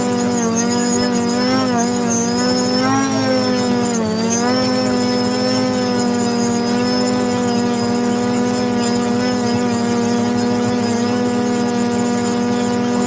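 No technical faults can be heard, and the signal carries the ordinary character of a WebRTC call path, with nothing above 8 kHz, which fits the G.722 wideband codec at 64 kbps.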